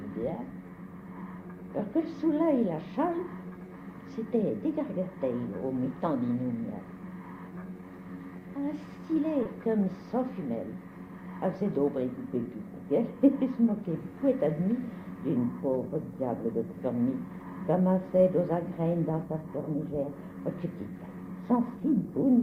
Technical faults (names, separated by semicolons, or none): short concealed packet loss